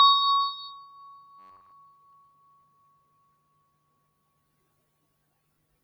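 From start to finish, a noise suppressor applied to music or sounds is treating steady content as noise: onsets pass, but held sound and decaying tails are pulled down by roughly 20 dB, so the level pumps and thins. Unlike a slow limiter, the dips follow sustain, not loudness.

From 1.39 to 1.72 s the sound collapses into a rigid, metallic buzz at 93.8 Hz, the robotic sound from repeated short buffers. Audio was likely arriving too seldom, so a fragment of about 10.7 ms was looped over essentially the whole stretch while the real material was skipped. Its fixed pitch sets it apart from a stutter or a dropout.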